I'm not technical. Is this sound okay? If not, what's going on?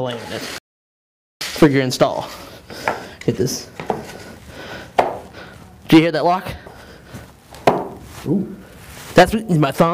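No, there's an audio dropout to silence from 0.58 to 1.41 s. The sound cuts out completely for about 0.83 s, with not even background hiss, then picks up again. Most likely the input was briefly lost, and whatever happened in that gap is gone.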